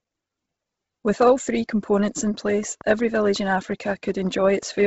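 Throughout the speech there is Bluetooth LC3 compression, likely from a low-bitrate LE Audio link. Nothing passes above 7.8 kHz, and the upper band has a breathy, grainy hiss where noise fills the missing detail. That synthetic texture sets it apart from a plain low-pass filter. The heavy damage fits a rate around 16 kbps with 10 ms frames.

From 2.27 s to 4.83 s a train of clicks ticks evenly at 5.5 per second, about fifteen pulses roughly as loud as the speech, likely from electrical interference. The near-identical shape and regular spacing distinguish them from random crackle or dropouts.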